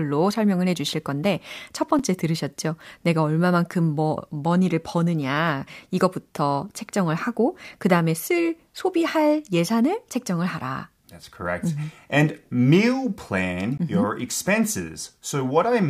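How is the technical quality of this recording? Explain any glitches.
Two short dropouts mar this speech recording, each a block of digital silence. At 1.99 s, between "설명을 해주실 건데 첫" and "들으셨죠 내가 얼마만큼 뭐", a 6 ms block of samples was left as zeros, likely because the output buffer wasn't filled in time. The abrupt cut to silence and back is too short to be heard as silence and comes across as a tick or dip. At 13.78 s, a 17 ms block does the same, heard as a slightly longer tick-like hole.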